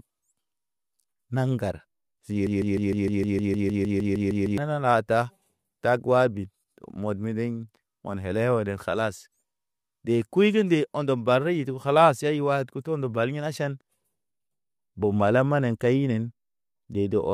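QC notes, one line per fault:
2.47–4.58 s, broken-record loop: the speech locks onto a tiny fragment about 0.15 s long (154 ms) and plays it back to back, identically, 14 times, giving that stuttering, stuck-needle effect for roughly two seconds. Whatever speech belonged in that stretch is simply gone. The likely cause is a playback, encoder or stream stall, where the last buffered chunk kept getting resent until things caught up again.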